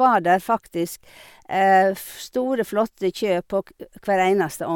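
No technical faults audible anywhere in the recording; nothing to flag.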